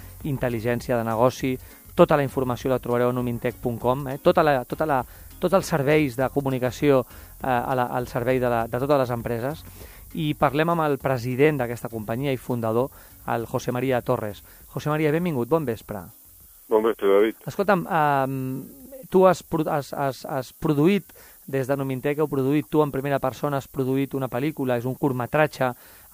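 Throughout the clip there is low bit depth with noise shaping. The audio sits at about 9 bits. Its rounding error is pushed upward in frequency. The result is a thin, steady hiss, rising toward the top of the band, only about 20 dB below the signal.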